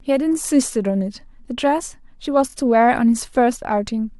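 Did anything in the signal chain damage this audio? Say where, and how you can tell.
Yes: repeated frames at the codec or storage stage. At 2.49 to 2.53 s one 23.2 ms block of speech plays twice more, a brief stutter adding 46.4 ms. Unlike a buffer dropout, nothing is lost; identical material returns and lengthens the audio.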